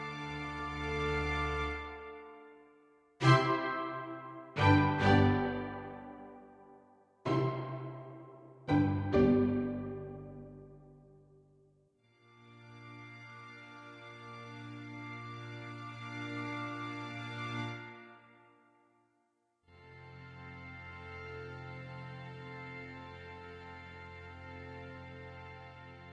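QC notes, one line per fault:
No faults found on this sound recording.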